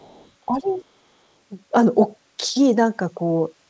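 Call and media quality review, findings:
Other side's voice leaking through, 0.00 to 0.30 s: faint second voice, roughly 35 dB under the talker. Likely residual loudspeaker echo that the echo canceller left in the microphone signal.

Other side's voice leaking through, 0.68 to 0.82 s: same faint far-end voice, again about 35 dB down. It coincides with the suppression dip and points to the likely cause being echo-canceller residual during double talk.

Speech suppressed in double talk, 0.46 to 0.83 s: talker level drops by around 10 dB at its deepest, over roughly 0.4 s. The likely cause is that the echo canceller could not separate near-end speech from echo while both sides talked, so it attenuated both. The band is limited to 8 kHz, which fits the G.722 wideband call path.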